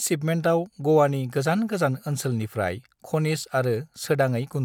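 No technical faults can be heard at any point in the speech.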